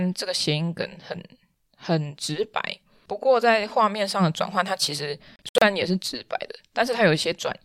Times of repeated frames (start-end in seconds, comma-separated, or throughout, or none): none